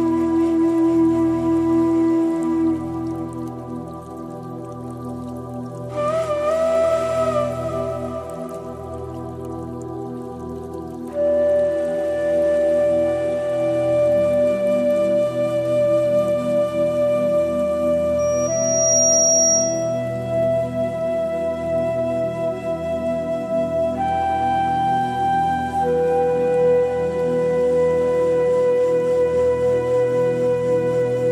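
From 18.19 s to 20.00 s, a loudspeaker feedback squeal builds at 5.7 kHz. The microphone recaptures its own loudspeaker and loop gain exceeds one there. The tone swells within about 0.7 s to roughly 5 dB above the sound, showing as one bright horizontal spectrogram line.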